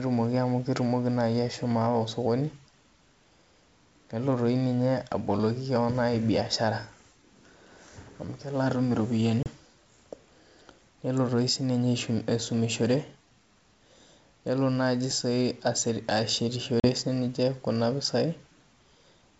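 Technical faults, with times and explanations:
9.43–9.47 s and 16.80–16.87 s, packet loss on an ADPCM call: sharp silent gaps (30 and 40 ms), then briefly distorted speech as the decoder's predictor resynchronises after a few lost packets.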